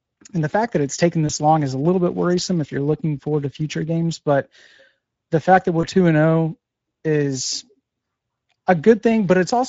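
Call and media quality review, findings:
Speex codec, throughout: hoarse, noisy texture from too few bits for the CELP excitation; damage plainly audible, consistent with a mid-rate mode near 16.8 kbps.

VoIP packet loss concealed by the speech codec, 1.27–1.31 s and 5.81–5.85 s: short stretched, fading smear after "fact that it's taken" (before "long is a little") and after "the fact that". The decoder extrapolates the last pitch and filter at falling gain, fitting one lost 20 ms frame each.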